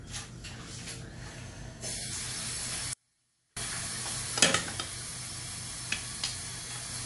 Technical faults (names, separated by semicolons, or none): MP3 compression; audio dropout to a faint residue